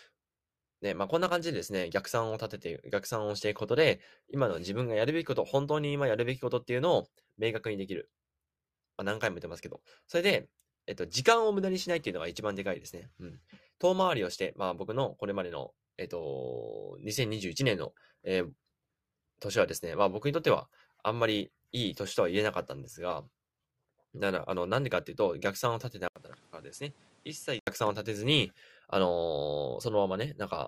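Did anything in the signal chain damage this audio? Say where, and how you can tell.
Yes. At 26.08 s the sound drops out for 80 ms, then returns dull, a few dB quieter, cut off above 11.5 kHz, with new noise roughly 30 dB down. It clears at 27.67 s. This is likely an input switched to a poorer device.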